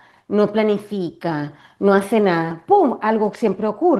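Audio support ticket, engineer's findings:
No faults found in the clip. The Opus voice compression at 20 kbps in hybrid mode keeps the full band, with only light coding texture on the speech.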